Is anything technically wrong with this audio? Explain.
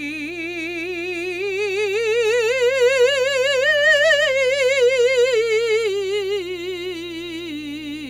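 Yes. Mains hum runs throughout the music: a steady 60 Hz tone, about 30 dB below the signal, from power-line coupling through a ground loop or transformer. Its fixed pitch and constant level set it apart from rumble.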